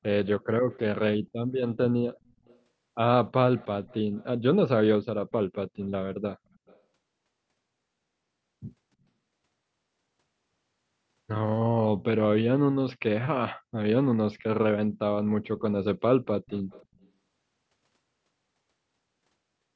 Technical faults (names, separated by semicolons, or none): echo leak